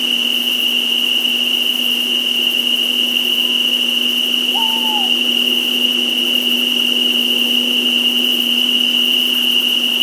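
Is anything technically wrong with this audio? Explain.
No, nothing in this recording of sounds points to a technical problem.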